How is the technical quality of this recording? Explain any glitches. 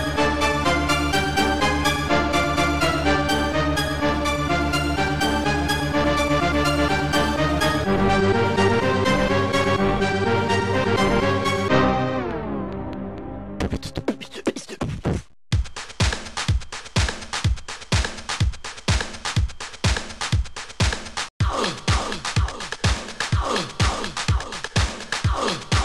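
One glitch stands out: a train of clicks from 8.62 s to 13.19 s. Some twenty sharp, similarly shaped pulses arrive at about 4.6 per second, spaced unevenly, each peaking roughly as loud as the sound itself, so they tick audibly over it. They most likely come from interference from nearby equipment or a faulty connection or power supply injecting pulses. Unlike random crackle, the clicks keep the same shape and persist as a sustained run, and unlike a lone pop they repeat for several seconds.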